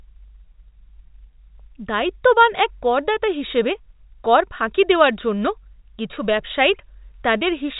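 No faults found in this speech clip; the telephone-band G.711 coding leaves nothing audible above about 3.8 kHz, which is normal for that path.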